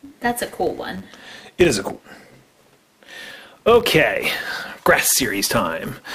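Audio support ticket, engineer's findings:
Filter restarted on every block, present throughout. Steady buzz at 100 Hz, louder on louder passages. Filter state appears reset at each block boundary, so every block opens with a small transient; the repeat rate points to roughly 10 ms processing blocks.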